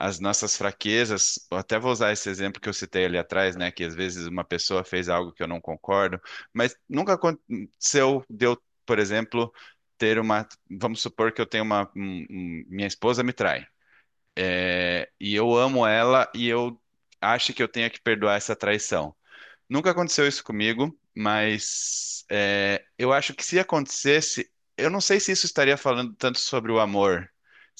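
Speech recording with no audible technical faults.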